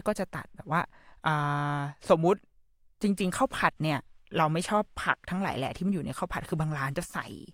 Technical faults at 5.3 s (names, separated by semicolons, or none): clock drift buffer slips